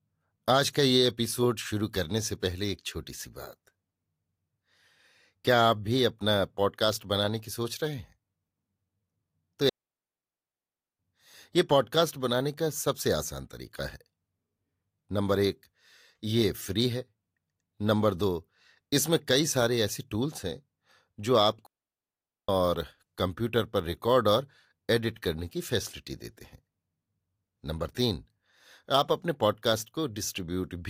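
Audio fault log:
9.69–10.99 s and 21.66–22.49 s, digital wireless dropout: the speech cuts out cleanly into near silence, first for 1.3 s, then for about 0.82 s, with no crackle, hiss or burst of noise on either side, just a very quick fade out and back in. This happens when the digital radio link loses too much data to rebuild the audio, so the receiver mutes the output until enough data arrives again.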